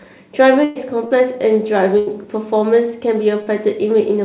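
A speech recording carried over a call path, band-limited to nothing above 4 kHz, which fits G.711 mu-law at 64 kbps, shows two bursts of packet loss, at 0.64 to 0.78 s and 1.99 to 2.10 s. About 120 ms and 80 ms of audio never arrived. The receiver stretched the last sound across each gap and faded it, then jumped ahead, so the intervening speech is absent. Short concealed packet loss occurs at 1.07 to 1.14 s and 3.43 to 3.49 s. Roughly 40 ms went missing each time and was patched by extrapolating the preceding signal before crossfading into the real audio, leaving a brief smear or wobble where a short sound may drop out.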